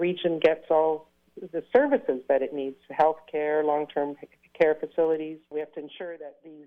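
Zipper noise from 5.0 to 6.04 s: a fade of about 15 dB moves in unsmoothed 2 dB steps, about ten a second, ticking as waveform stairsteps and thin vertical spectrogram lines.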